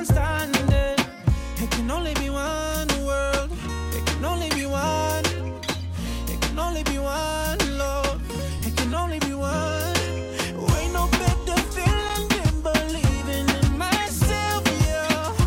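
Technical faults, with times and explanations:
8.57–8.61 s, frames out of order: Two neighbouring runs of coded frames reach the decoder in swapped order, and it plays them as received. The sound over this short stretch comes out with its halves exchanged. The swapped block is about 36 ms, with two frames in each run. The result is a brief garbled flutter. Nothing is lost, so timing after the swap is unchanged.
11.99–12.19 s, loose connector crackle: A worn or dirty contact in the signal path makes and breaks rapidly while it moves. Each break chops the signal for an instant. Each reconnection lands abruptly. This gives an irregular burst of crackle and scratching, about 0.2 s long. The spacing of the dropouts is random, so it sounds rough and scratchy rather than like a steady buzz or tone.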